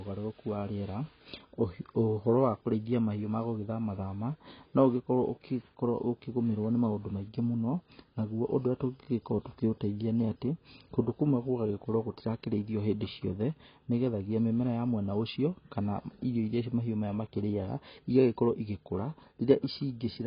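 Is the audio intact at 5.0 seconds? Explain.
No. At 5.0 seconds the speech carries the same damage heard across the whole clip, which is likely AAC compression. Nothing is heard above 5 kHz, so the top of the spectrum is simply gone. AAC-LC splits each frame into frequency lines and spends its few bits on what the hearing model ranks highest. The rest is discarded. The damage is heavy, which fits a bitrate around 16 kbps. The speech sounds dull and smeared, with a warbling, fizzy edge on sibilants.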